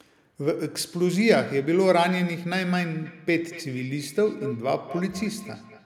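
Feedback echo between two devices runs from 3.05 s to the end of this speech clip. The sound returns about every fifth of a second, peaking about 15 dB below the speech, because a second device's microphone recaptures another device's playback, which that device's echo canceller cannot remove.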